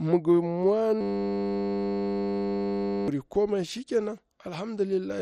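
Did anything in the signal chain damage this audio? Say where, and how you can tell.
Yes. At the codec stage, the whole clip sounds dull and gurgling, with a coarse, granular texture. A spectrogram shows nothing above 13.9 kHz, and the upper bands blink on and off in blocks. This is likely heavy MP2 compression, at a rate that fits about 56 kbps.

At the driver or buffer stage, a system hang loop runs from 1.01 to 3.08 s. One 10 ms slice repeats over and over, producing a steady 100 Hz buzz. The waveform shows identical cycles tiling that span, and roughly two seconds of audio are lost.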